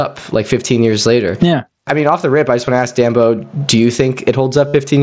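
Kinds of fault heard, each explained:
Gain pumping: The gain swings by around 15 dB, likely from gain set far too high with a fast limiter clamping every peak. The waveform envelope looks flattened.
Concealed Bluetooth headset packet loss: Missing headset packets are filled by repeating a matching recent stretch of waveform. A brief loss at 2.67 s, just after "the rip I just", is nearly hidden. The 60 ms run from 4.68 to 4.74 s is a held buzzy tone ending in a slight warble, likely several packets in a row. The waveform shows one short cycle repeated at constant level, and the spectrogram shows flat, steady harmonic stripes.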